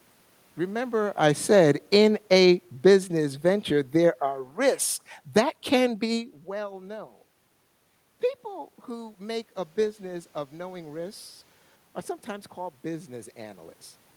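From 0.87 s to 6.07 s there's automatic gain falling. The gain control decided the input was too loud or its background noise too strong and pulled its gain down gradually, by about 8 dB overall, so the speech starts loud and then sinks over those five seconds, with the room noise sinking right along with it. That shared drop in the background is the giveaway. The level shifts from the talker moving around 1 s and 6 s leave the room noise untouched.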